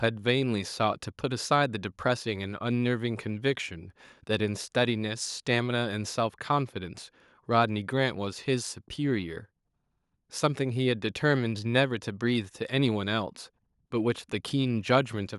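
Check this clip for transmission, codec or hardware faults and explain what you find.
No fault of any kind can be heard in this speech recording; the signal stays continuous and stable throughout.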